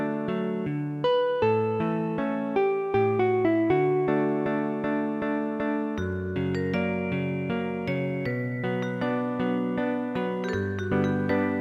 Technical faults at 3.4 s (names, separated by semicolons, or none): none